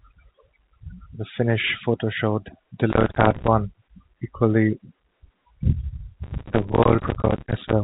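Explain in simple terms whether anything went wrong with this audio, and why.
Two kinds of fault are audible. Processor overload crackle appears from 2.90 to 3.48 s, right after "finish photo showed", and again from 6.24 to 7.73 s. The processor kept missing its deadlines for tiny chunks of audio, a few milliseconds each, leaving dozens of silent gaps heard as gritty crackle.

Packet loss with pitch repetition occurs at 6.96 s. One 20 ms piece of audio went missing, and the receiver repeated the last bit of pitch to fill it, giving a brief buzzy hold. The telephone-band sound of the G.711 line itself is expected.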